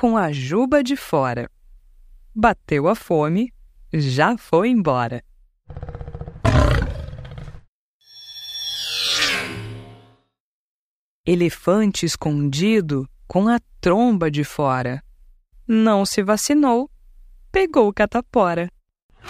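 At 6.49 to 6.54 s the level dips abruptly by about 6 dB, a brief notch in the waveform, likely one channel dropping out before the mono sum.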